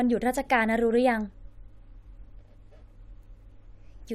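Nothing stood out as a technical fault on listening to this speech recording.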